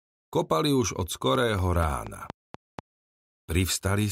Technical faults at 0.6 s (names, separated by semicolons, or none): none